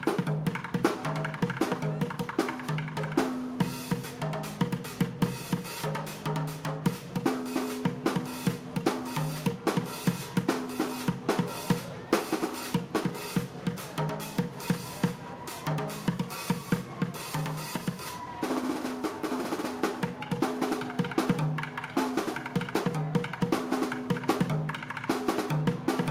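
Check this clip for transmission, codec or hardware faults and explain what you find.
No faults can be heard anywhere in this recording.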